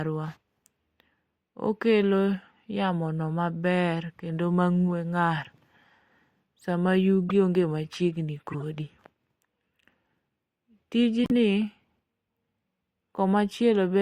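At 7.29 to 7.31 s the speech is interrupted by a short chirp. This is a corrupt frame decoded. Damaged bits were played as if valid, so energy lands at wrong frequencies. The burst peaks around -20 dBFS and spans what sounds like a couple of frames. A longer squeak follows at 8.52 to 8.62 s, also near -20 dBFS, covering a few frames. The loudest comes at 11.24 to 11.32 s, near -15 dBFS, over several frames.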